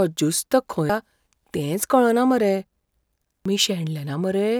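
At 0.90 s and again at 3.46 s the speech is broken by a short blip, a sign of damaged data in the compressed stream: corrupted bytes make the decoder misread frames and lose sync until it locks onto the next valid frame header.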